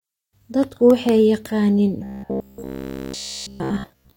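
From 2.04 s to the end of the clip, the speech collapses into a robotic sound from repeated short buffers: a rigid, metallic buzz near 66.7 Hz that roughly tracks the words. It is likely caused by starved playback looping about 15 ms chunks almost continuously. The waveform shows identical 15 ms segments, and the spectrogram shows evenly spaced harmonic lines.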